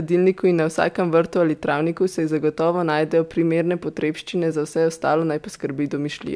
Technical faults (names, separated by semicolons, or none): none